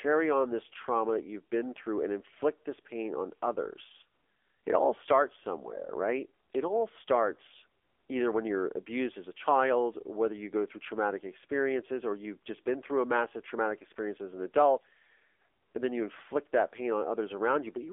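AMR narrowband mobile codec coding runs through this speech clip from start to finish, confining it to a telephone band of roughly 300 Hz to 3.5 kHz, so it sounds thin and boxy with no air above. The codec rebuilds the voice from a vocal-tract model excited by a handful of pulses per short frame, and here that synthetic, buzzy edge is plainly audible, which fits one of the lower AMR-NB modes, around 7.4 kbps.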